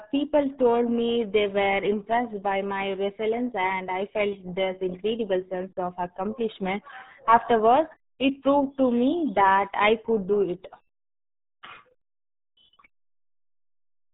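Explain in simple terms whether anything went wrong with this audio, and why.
Something did go wrong, and it lasts the whole clip: this speech has been through the RealAudio 14.4 codec, an early squeeze-it-small format built for dial-up modems. Everything above about 3.8 kHz is gone, so the voice sounds muffled, and the heavy compression adds a gargly, watery garble. That garble is what separates it from a simple telephone-style filter, which would sound dull and narrow but still smooth.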